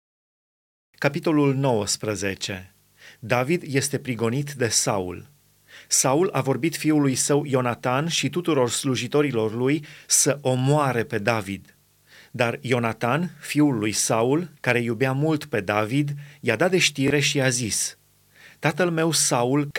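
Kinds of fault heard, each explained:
Bluetooth stutter: a wireless audio packet arrived late or was lost, so the receiver replayed its last buffer to fill the gap. Just after "dat de", at 17.08 to 17.10 s, a short slice repeats and speech resumes 23 ms further on, consistent with one lost packet.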